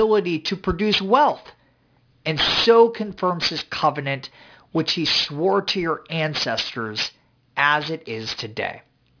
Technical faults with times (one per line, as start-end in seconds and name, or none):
0.00-9.20 aliasing